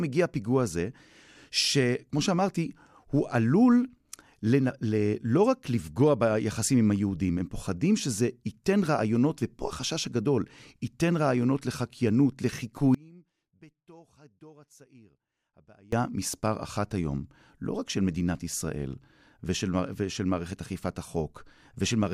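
Speech runs until 12.95 s, then an audio dropout to a faint residue cuts it off abruptly, and it returns just as suddenly at 15.92 s, about 3.0 s later. The gap holds only faint sound, roughly 30 dB below normal. The likely cause is a loss of the source while the downstream path stayed live. On a waveform this is a sharp collapse to a thin band, and on a spectrogram a dim, vertically edged stretch.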